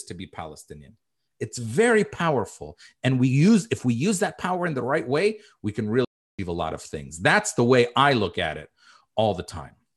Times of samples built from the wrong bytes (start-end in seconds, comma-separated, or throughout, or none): none